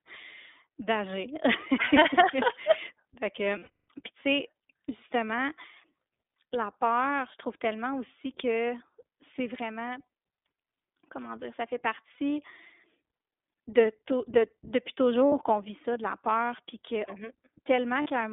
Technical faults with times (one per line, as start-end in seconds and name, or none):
0.00-18.33 iLBC codec
3.58-3.78 lost iLBC frames
12.14-12.19 lost iLBC frames
15.27-15.34 lost iLBC frames
18.02-18.07 lost iLBC frames